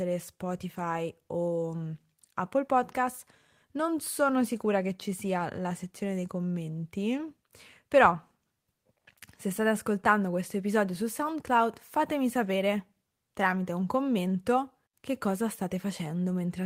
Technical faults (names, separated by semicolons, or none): none